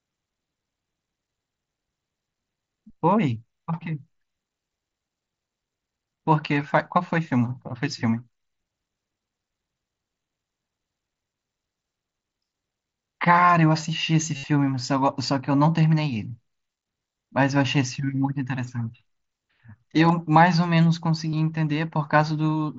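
Brief blips at 6.15, 20.08 and 21.31 s, and a buzzy held tone from 14.37 to 14.44 s, are concealed Bluetooth headset packet loss, with recent waveform repeated over the lost packets.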